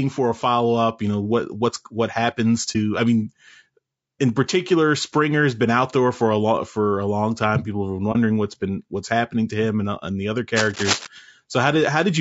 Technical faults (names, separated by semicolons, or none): low-delay AAC compression; AAC frame loss with muting; cable scratch noise